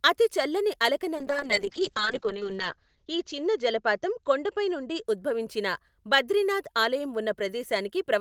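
From 1.16 s to 5.11 s a call bitrate drop occurs: the link's bandwidth estimate collapsed and the encoder was forced onto a much smaller bit budget, with a depth that fits a fall from roughly 32 kbps to about 6 kbps. Coding grows coarse and the audio band narrows from 20 kHz to 8 kHz, so the speech turns muffled and rough, with a watery texture that is worst for about a second before quality returns.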